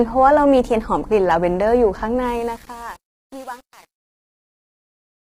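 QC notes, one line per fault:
Throughout: low-delay AAC compression. The speech was likely squeezed through AAC-ELD at about 24 kbps, whose low-delay window codes only about 500 frequency lines a frame with too few bits at this rate. The result is heavy damage: a rough, grainy voice, noise filling the gaps between harmonics, and a dulled, synthetic-sounding top band.
2.26 to 5.35 s: truncation distortion on a fade. The fade-out, which begins around 2.26 s and ends at 5.35 s, was computed at only 8 bits with no dither. As the level sinks toward the smallest step, the waveform collapses into coarse square steps, so the tail turns gritty.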